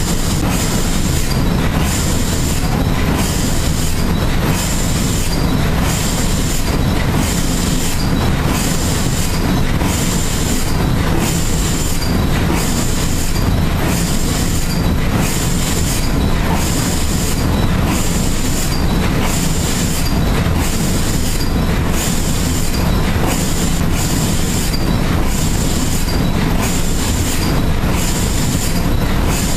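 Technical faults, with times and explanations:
0.41 s and 23.80 s, CD skip: at each point the sound cuts out for a few milliseconds, heard as a small tick, then resumes from a different spot. The laser has been knocked or thrown by a disc flaw onto another turn of the spiral track. The player briefly mutes while it relocks and then carries on reading from wherever it landed, so the audio is not continuous across the break.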